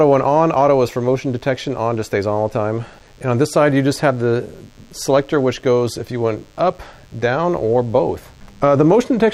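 Throughout, a DECT cordless phone buzz sits far beneath the sound. Radio bursts every 10 ms get rectified, giving a thin, steady 100 Hz buzz rich in harmonics.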